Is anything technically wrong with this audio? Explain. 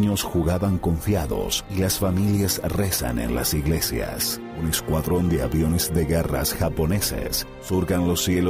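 No, nothing technically wrong can be heard here.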